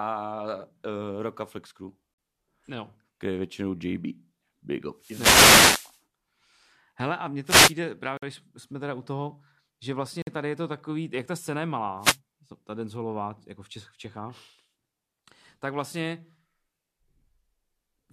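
It's a speech clip with two separate problems. First, there are three gaps between stream segments, hard-edged silent holes at 2.14 to 2.18 s (about 45 ms), 8.17 to 8.23 s (about 51 ms), and 10.22 to 10.27 s, right between "teda u toho že" and "tady je to takový" (50 ms). The segments look to be 2 s long, and their timestamps don't quite butt up against each other, so the player drops silence into the seam. Nothing is actually missing; the timeline just gets stretched a little at each hole. Second, there are three wireless microphone noise hits: a long swish of static from 4.97 to 6.00 s, a shorter one from 7.45 to 7.74 s just after "a mně", and a brief burst from 11.99 to 12.18 s between "jak ta scéna je" and "ta denzolová jako v". Those are the FM link fading as reflections cancel the signal, so receiver noise swells up over the speech until the level recovers.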